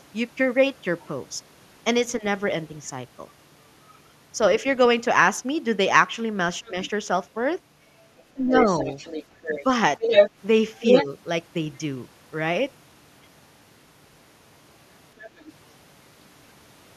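A speech recording in which the echo canceller on the talker's end likely failed to fully remove the far end's loudspeaker sound from the microphone, so the other side's voice leaks through. Faint scraps, far below the talker's level, appear at 1.01 s and 3.87 s. Louder fragments, still well under the talker, occur at 6.65–6.9 s and 15.18–15.53 s. The longest leak, from 8.52 to 11.05 s, sits at roughly the same loudness as the talker. Where both sides talk at once, the canceller likely could not tell the talker from the echo and turned both down, giving speech suppressed in double talk. At 6.6–6.76 s the voice dips by about 10 dB for around a tenth of a second, and at 8.34–8.54 s it drops by about 15 dB for around a fifth of a second, just as the long leak begins.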